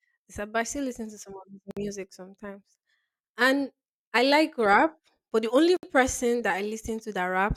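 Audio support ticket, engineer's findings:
Segment concatenation without encoder delay/padding trim. Separately encoded pieces joined as-is; leading priming silence and padded final frame retained at each seam, roughly every 4.0 s.

Gap at a join of encoded pieces, 1.71 to 1.77 s: 57 ms dropout in continuous speech, hard edges smeared by codec, speech resumes where it stopped.

Gap at a join of encoded pieces, 5.77 to 5.83 s: same symptom, 64 ms gap at the next seam.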